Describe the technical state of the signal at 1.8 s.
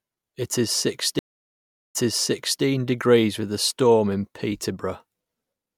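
At 1.8 s the signal sits inside a stream reconnect spanning 1.19 to 2.63 s: about 0.74 s of silence while the player rejoins, then speech resumes 0.71 s earlier, repeating audio, which a plain dropout wouldn't do.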